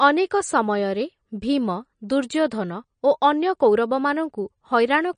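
MP3 compression is plainly audible throughout the speech. There is nothing above 9.6 kHz, and weak frequency detail flickers in and out between frames, which fits a starved bitrate near 40 kbps. The likely cause is an MP3 encoder cutting treble and zeroing quiet components.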